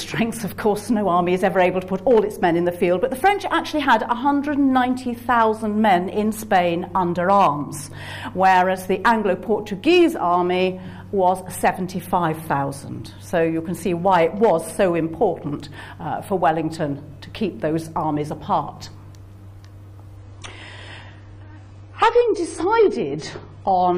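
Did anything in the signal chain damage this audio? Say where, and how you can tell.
Yes. An adaptive stream at a lower bitrate takes over from 20.17 s to the end at 23.98 s. With no gap, the treble suddenly vanishes above 10 kHz and codec artefacts thicken. This points to the network stage switching from about 96 to 24 kbit/s AAC.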